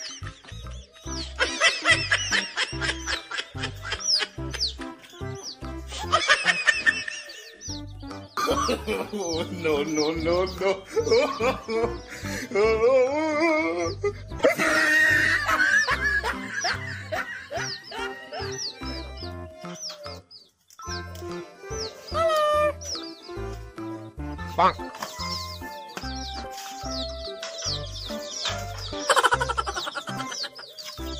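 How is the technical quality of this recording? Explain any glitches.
There is one glitch. At 14.38–14.47 s the audio skips ahead with a brief disturbance, likely a broken MP3 bit reservoir. Frames after a cut decode mismatched borrowed bytes, which shows as a short disturbance on a spectrogram.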